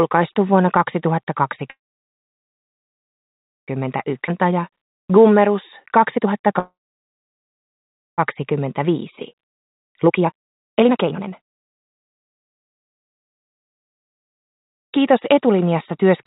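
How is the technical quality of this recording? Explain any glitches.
The recording has clear transmission faults: two stalls, a forward jump and two stretches of hurried playback. All of it sits in a narrow band with nothing above 4 kHz, which fits narrowband telephone-style call coding.

Call audio freeze, 1.70 to 3.70 s and 6.59 to 8.20 s. Packets were likely held up in transit, so the receiver ran dry. The last sound trails off briefly, then silence lasts about 1.9 s and 1.5 s. Playback resumes where it stopped, with nothing lost.

Skip ahead, 4.27 to 4.30 s. A stretch of roughly one and a half seconds was dropped while later audio was already queued. Playback jumps straight forward. The two sides are joined almost directly, with only a tiny fill between them.

Jitter buffer speed-up, 4.19 to 6.42 s and 8.52 to 15.33 s. After the stalls the buffer held too much audio. The receiver trimmed many short pitch-period slices to catch up. 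Speed rises to 109% and then 129%, removing about 0.2 s and about 2 s. Pitch stays the same, but the second stretch sounds noticeably rushed.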